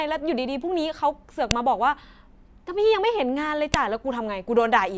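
At 1.51 s there's a sharp, loud click in the speech, and another at 3.74 s. That's a file header played as audio: separate WAV pieces got joined without stripping their headers, so those header bytes come out as a brief snap, regardless of the speech around them.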